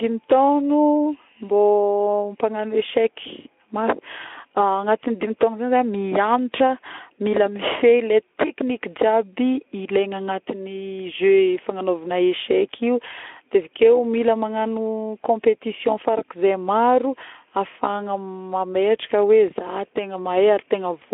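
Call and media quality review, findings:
No faults found in this speech clip. The Speex path sounds like a mid-rate setting of roughly 15 kbps on a 300 Hz to 3.4 kHz telephone band, with nothing above 3.8 kHz and only light codec roughness.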